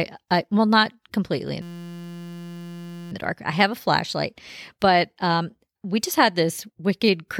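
After "well not completely in", from 1.62 to 3.12 s, a steady 172 Hz buzz: a system hang loop replaying one 5.8 ms buffer 258 times, consistent with 256 samples.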